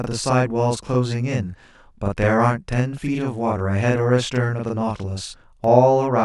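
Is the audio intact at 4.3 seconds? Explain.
No. At 4.35 s there is a single sharp click, likely from dropped samples: a fraction of a millisecond lost, so the waveform jumps rather than falling silent as in a dropout. Channel delay (doubling) also runs through this moment: one channel arrives 40 ms late and is summed to mono, giving one equal-level slap copy rather than a decaying reverb tail.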